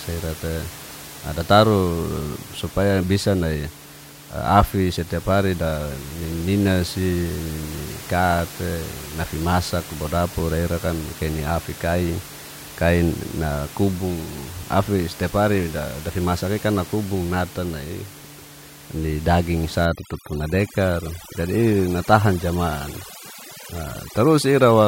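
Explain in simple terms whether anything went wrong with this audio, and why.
Overdone noise removal from 19.85 s to the end: too-strong noise reduction cuts quiet parts of the speech, leaving twinkly silence.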